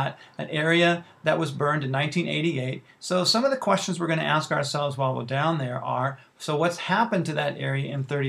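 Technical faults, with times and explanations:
No technical faults detected.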